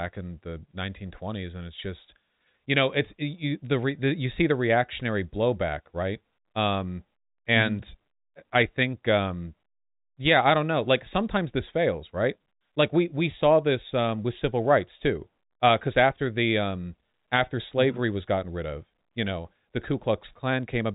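Nothing stood out on listening to this speech recording, which carries the narrow telephone band of G.711 coding with nothing above about 3.8 kHz.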